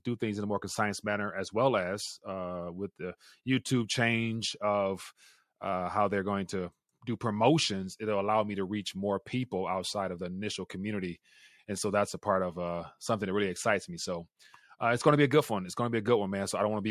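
No faults turn up anywhere in this recording: no dropouts, no glitches, no level or timing problems.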